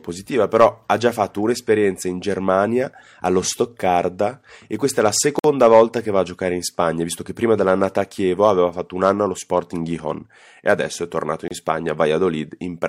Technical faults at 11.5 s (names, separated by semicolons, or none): gap between stream segments